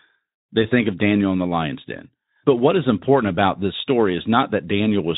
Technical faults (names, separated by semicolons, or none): none